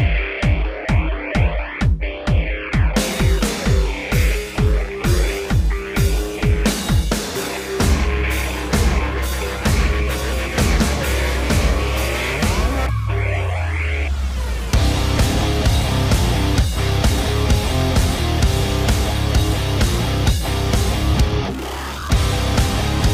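A resampler restarted on every block runs from 0.38 to 2.82 s in this audio. Each 20 ms block was converted from 48 kHz to 44.1 kHz in isolation. The resulting edge error recurs at 50 Hz, heard as a buzz riding on the signal.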